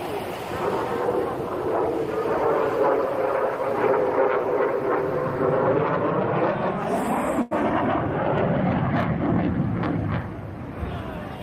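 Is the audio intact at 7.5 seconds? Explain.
No. From 7.41 to 7.53 s the sound hangs on itself, one moment held about 96 ms too long with a faint buzz or dip. This is a short stall from a late packet: the jitter buffer ran dry, so the receiver stretched the last sound until the packet arrived and resumed without losing anything, leaving everything after it 96 ms later.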